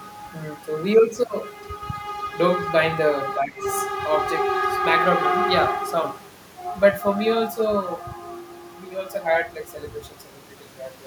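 Speech that briefly dips between 3.42 and 3.66 s, sinking by around 15 dB for roughly a fifth of a second before recovering. This is likely speech suppressed in double talk, where an echo canceller could not separate the near-end talker from overlapping far-end echo and attenuated the near-end talker along with it.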